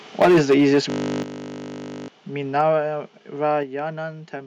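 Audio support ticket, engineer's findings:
Microphone overload at 0.2–0.79 s, harsh crackle with tops flattened, about 10 dB over and roughly a sixth of samples clipped; again lightly at 2.6–2.76 s, about 1 dB over. Likely mic input gain set too high, driving the converter to its limit.

Microphone volume stepped down at 0.22 s (about −3 dB), 1.23 s (about −9 dB), 2.61 s (about −3 dB) and 3.63 s (about −5 dB). Speech and background drop together, likely from the call software's auto-gain reacting to a too-loud or clipping mic.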